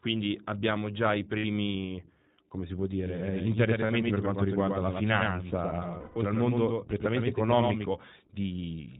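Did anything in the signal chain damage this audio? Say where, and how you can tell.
Yes. The codec stage is the first culprit. The whole speech clip has the narrowband, slightly rough and synthetic quality of the iLBC codec. Nothing comes through above 4 kHz, and the coding damage is plainly audible throughout. The texture points to iLBC running at about 15.2 kbps with 20 ms frames. Each frame's excitation is coded on its own.

On top of that there are lost iLBC frames from the network, in three places. The first runs 1.38 to 1.45 s, about 60 ms, which fits three frames. The second runs 3.86 to 3.92 s, about 40 ms. The third and longest runs 5.98 to 6.17 s, about 180 ms. In each gap the decoder holds the last pitch cycle with some noise mixed in, so you hear a sustained, buzzy vowel. In the longest gap that vowel fades away. Because the frames stand alone, the voice snaps back almost straight after each gap.

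There's also a doubled audio track from 3.06 s to 7.86 s. A full-band second copy trails the original by roughly a tenth of a second, about 5 dB down. It has no decay and no room colour, so it isn't a reflection, and it switches on and off abruptly at both ends. That points to a likely cause of the same audio being captured again through a slower path, or two unaligned copies left in an edit.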